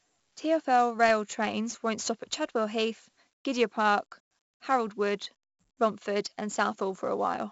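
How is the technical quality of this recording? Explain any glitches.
The quality is poor throughout. Across the whole speech clip, a gritty hiss rides every loud passage and sharp attacks distort. This is heavy 4-bit ADPCM compression, whose coarse predicted steps cannot track fast changes. Nothing is heard above 7.7 kHz, which fits a 64 kbps stream.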